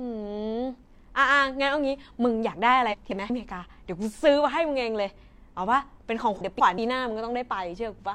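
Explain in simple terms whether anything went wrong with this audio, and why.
Twice the speech gets scrambled: from 2.91 to 3.30 s, and again from 6.41 to 6.78 s. That's frames out of order. Two neighbouring chunks, each about 0.19 s long, play in swapped order. You hear a garbled flutter, but nothing goes missing.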